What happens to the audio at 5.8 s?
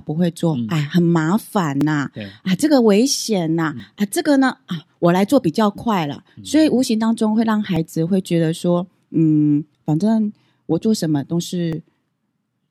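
At 5.78 s an overlap between stream segments drops a few milliseconds at a 2-second segment boundary, so the waveform jumps and a brief click or skip is heard.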